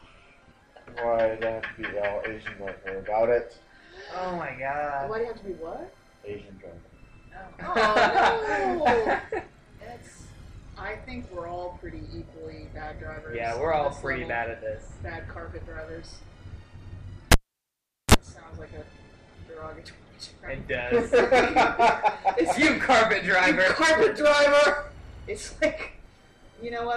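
At about 17.32 s a cable gets pulled and plugged in: there's a pop, then roughly 0.78 s of near silence, a brief 32 ms burst of 60 Hz mains buzz as the plug tip makes contact first, and another pop when the sound returns at 18.14 s.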